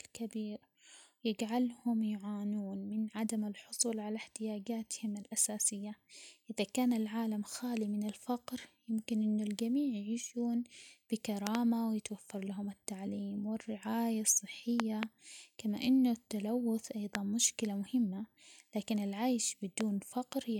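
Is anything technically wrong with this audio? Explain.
Yes. There are loud pops at 11.47–11.57 s, a double pop just before "ويتوفر لهم التعليم والرعاية", and at 14.80–15.05 s, another double pop between that phrase and "كما إنه التلوث". Single pops fall at 17.15–17.17 s and at 19.81–19.83 s, after "مهمة لكن العيش". Each is likely a sudden electrical pulse, such as from a switch, static or a driver glitch, added to the signal and briefly shaped by the following circuitry. Peaking roughly 20 to 25 dB above the speech, they sound like sharp thumps while the speech carries on underneath.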